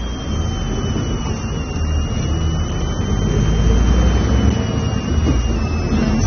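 From start to finish, a switching power supply, running in an audible burst mode or beating with another supply, is leaking onto the audio path, producing a switching supply whistle: a thin high tone near 3 kHz that wanders between 2.6 and 3.2 kHz, roughly 20 dB below the sound.

Throughout, the audio is also likely passing through low-bitrate AAC compression, with a bitrate that could be around 24 kbps. Nothing remains above 6.3 kHz, so the sound is dull and muffled. Sustained parts warble, and sharp, noisy detail turns fizzy and smeared.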